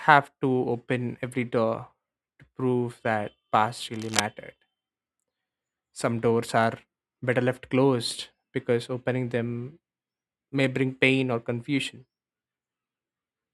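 A worn cable, connector or control was likely moved while recording, so its contact resistance jumped about erratically for a short stretch. The result is cable scratch noise from 3.93 to 4.20 s: a dense, uneven burst of scratching and rustling laid over the speech for roughly a quarter of a second. It sits only a little below the level of the speech, so it is loud enough to cut clearly across what is being said at that point.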